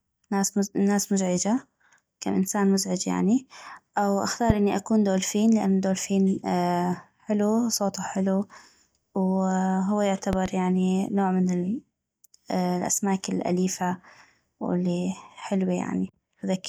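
A voltage spike, likely from a switch or static discharge, enters the signal chain, causing a loud pop well above the speech at 4.50–4.53 s, after "انسان مزعج يعني او", and a double pop at 10.33–10.48 s, before "يعني نوع".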